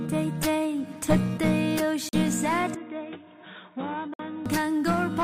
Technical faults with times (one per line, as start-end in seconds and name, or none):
2.09-2.13 gap between stream segments
2.75-4.46 input switched to a poorer device
4.14-4.19 gap between stream segments